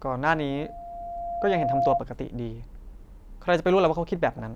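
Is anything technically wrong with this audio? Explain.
Yes, there is loudspeaker feedback squeal from 0.34 to 2.02 s. A 692 Hz tone grows over about a second and a half to roughly 5 dB above the speech, because the microphone re-amplifies its own loudspeaker output at that frequency. Unlike a steady hum, it swells steadily.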